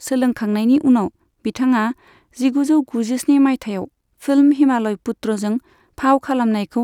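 No technical faults can be heard anywhere in the signal.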